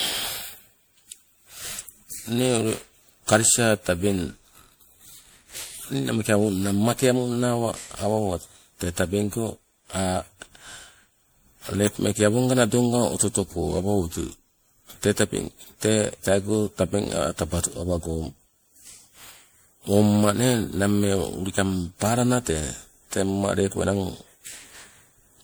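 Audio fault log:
throughout: generation loss. The speech sounds swirly, smeared and hollow, with consonant onsets blurred beyond what one low-rate encode would give. This likely comes from repeated MP3 re-encoding, around seven passes at a rate near 96 kbit/s, each requantising on a shifted frame grid.
13.68–14.95 s: drift correction step. The speech abruptly slows by 5.36% and drops 95 cents, nearly a semitone, then snaps back to normal speed and pitch. This is likely a clock-matching resampler changing playback rate in one step to rebalance its buffer.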